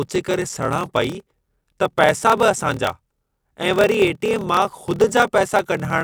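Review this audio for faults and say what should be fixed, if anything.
A block size mismatch (padded) runs throughout: short zero-filled gaps recur as a 38.3 Hz buzz, and the speech plays at 0.889 speed. The waveform shows regular flat near-silent runs, and the spectrogram shows thin vertical gaps, which fits 1024-sample writes into larger reads. Match the block sizes between stages.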